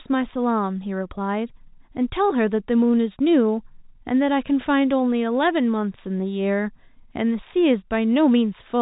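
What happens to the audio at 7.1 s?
Nothing goes wrong at 7.1 s: the speech carries on intact there, with the telephone-band G.711 coding passing it as usual, its faint quantisation hiss riding under the signal and nothing above about 3.8 kHz.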